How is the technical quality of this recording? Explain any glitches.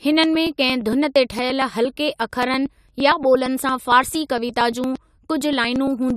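The recording has a recurring glitch that runs through almost all of it. From 0.12 s to 6.10 s there are periodic USB or driver dropouts, about fifty of them, every 0.115 s. Each time, around 10 ms of audio is skipped, not replaced with silence, so the sound on either side is joined abruptly. You hear this as a steady train of ticks under the speech. A background task stalling the audio path at a fixed interval explains the clockwork regularity, which sets it apart from random network packet loss or isolated clicks.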